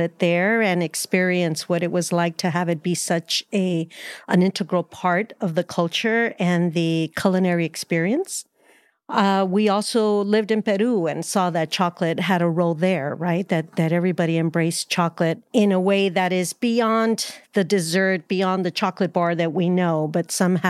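No technical faults occur at any point in the recording.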